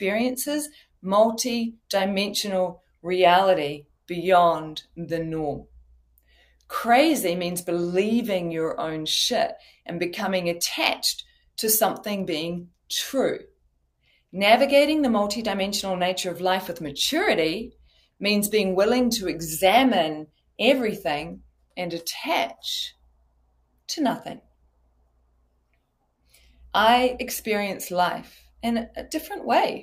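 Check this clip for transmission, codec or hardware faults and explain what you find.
A speech-oriented noise suppressor is processing this audio, and it produces two related faults.

Noise suppressor applied to music or sounds, throughout: the suppressor treats sustained, non-speech content as background noise and pulls it down, while short transients pass. Gain swings by roughly 20 dB as the processor keeps deciding what counts as noise. Sustained parts and decays drop away, and the level pumps and flutters instead of holding steady.

Sound cut by the noise suppressor, at 0.70 to 6.71 s, 9.58 to 9.88 s, 11.23 to 11.57 s, 12.67 to 14.34 s, 17.70 to 18.21 s, 20.26 to 26.74 s, and 28.31 s to the end: in these stretches the suppressor judged the held or fading sound to be noise and attenuated it harder than elsewhere. The deepest drops reach about 22 dB, and the last stretch drops by about 17 dB. 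Tails sink or are cut short, leaving the audio thin while its onsets still come through.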